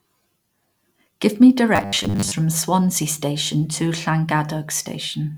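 From 1.76 to 2.36 s the speech turns robotic: a rigid metallic buzz at 100 Hz, likely from a 10 ms buffer being repeated for most of the stretch.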